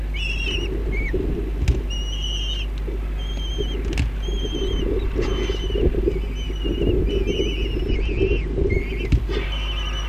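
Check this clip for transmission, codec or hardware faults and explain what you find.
One fault is present, a Bluetooth SBC bit pool drop from 7.88 to 8.73 s. The link likely congested, so the sender cut its bit budget. Upper sub-bands lost their bits and the rest were quantised coarsely. The treble dulls and gritty noise rises. This points to a fall from bit pool 28 to about 12, near 96 kbps.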